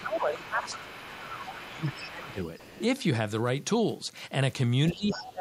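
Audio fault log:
0.00–0.97 s, 1.20–2.39 s and 4.92–5.41 s, speech suppressed in double talk: the talker's level sinks while the far side is also sounding, reaching about 15 dB down in the first two spans and about 20 dB in the last. The cause is likely an echo canceller that cannot tell its own talker from loudspeaker echo and turns both down. The waveform envelope shrinks across each span; on a spectrogram the speech energy fades in those regions.
0.37–0.42 s, 0.62–1.94 s, 2.23–2.81 s and 4.94–5.32 s, other side's voice leaking through: a second, weaker voice is audible under the talker. It sits about 20 dB below the speech in the first three stretches and about 15 dB below in the last. The likely cause is the far end's loudspeaker playback reaching the microphone and not being fully removed by the echo canceller. On a spectrogram a fainter, independent set of harmonic bands overlaps the main voice.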